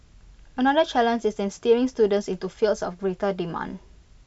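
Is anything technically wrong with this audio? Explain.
No, the speech signal shows no technical faults anywhere in the recording.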